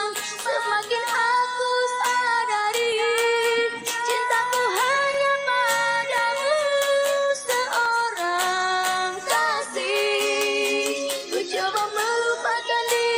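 Five sharp single clicks land at 2.92, 5.14, 6.18, 7.86 and 11.54 s. Each is most likely dropped samples: a tiny stretch, a fraction of a millisecond, goes missing, so the waveform leaps abruptly from one value to a later one instead of moving smoothly. Nothing audible is removed; only the discontinuity is heard, as a brief tick. On a spectrogram each shows as a thin vertical line spanning the frequency range; on the waveform, as a step.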